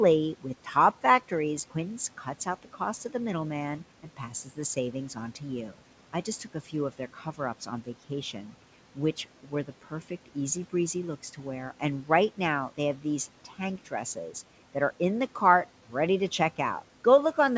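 The noise suppressor in this speech recording mistook parts of the talker for noise at 2.24–2.79 s, 4.03–4.77 s (after "cost to the middleman"), 6.13–8.53 s, 9.43–10.36 s (before "easy breezy looks to") and 13.45–14.35 s. Brief stretches were turned down by about 8 to 11 dB, so those sounds come across swallowed and faint.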